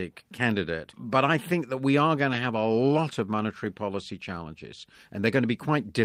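Single packets went missing at 0.35–0.37 s, 2.33–2.35 s and 3.49–3.51 s. Each time, the decoder played the low-bitrate copy carried in the next packet, so it is a lost packet rebuilt from error correction: no gap, but a brief 20 ms patch of rougher, noisier speech.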